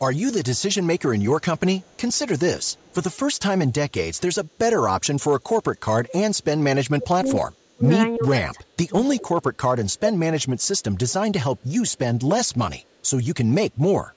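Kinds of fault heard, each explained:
hard clipping: The signal reached a stage about 5 dB hotter than it could pass, so a small fraction of samples, under one percent, had their peaks sliced flat. Those squared-off tops add upper harmonics, heard as brief crackle on the loudest moments throughout the speech.
echo leak: A far end playing this call over a loudspeaker likely had an echo canceller that let some of its microphone pickup through. A faint copy of the speech returns 343 ms late, roughly 30 to 40 dB down, across 1.42 to 3.39 s, 4.46 to 5.81 s and 9.99 to 13.1 s.
speech suppressed in double talk: With both sides talking at once, the echo canceller likely could not tell the local talker from loudspeaker echo and turned everything down. The speech dips in pieces by up to about 30 dB between 6.8 and 9.46 s, and briefly around 10.7 s.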